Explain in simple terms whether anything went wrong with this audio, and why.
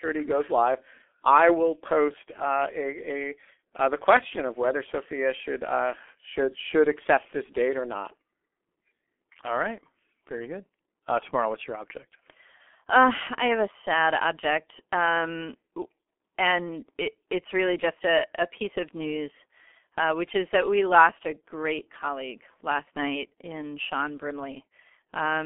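From start to finish, the speech has passed through the G.723.1 codec, an early internet-phone system that squeezes sound hard. Everything above about 3.6 kHz is gone, so the speech sounds muffled and boxed-in, and the heavy squeezing adds a rough, hoarse quality and smears consonants together. A plain telephone line would also sound muffled but stay clean; the hoarseness and blurred consonant edges show that coding damage, not just narrowing, is at work.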